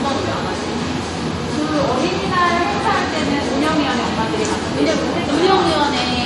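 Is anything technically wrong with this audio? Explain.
Yes. All the way through there's clearly audible compression damage, most likely MP3 compression at a low bitrate, with the sound fitting something around 48 kbps. Nothing comes through above 11.4 kHz, so the top end is sliced off flat. That's the encoder running out of bits, dropping the treble at a fixed cutoff and zeroing quieter frequency lines that flicker on and off between frames. You hear it as a watery, swirly texture, with smeared attacks and metallic chirps on bright transients.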